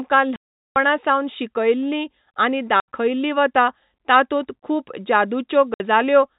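Packet loss filled with silence leaves hard-edged gaps at 0.36 to 0.76 s, 2.80 to 2.88 s and 5.74 to 5.80 s, all multiples of 20 ms, which suggests 20 ms packets.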